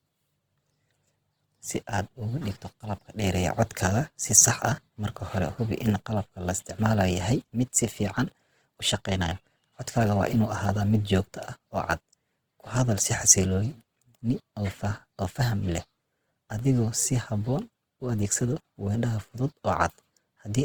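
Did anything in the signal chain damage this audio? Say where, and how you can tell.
Yes, at the codec: the speech sounds grainy throughout, likely Opus compression around 16 kbps refilling bands with noise. The spectrogram stays dense up to 20.4 kHz, with few holes.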